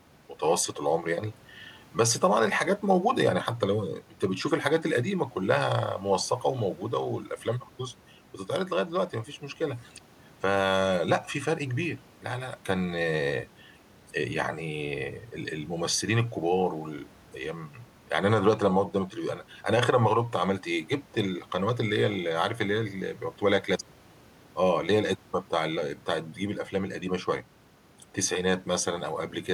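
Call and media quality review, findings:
Nothing stood out on listening to the speech, with only faint room noise about 30 dB below it.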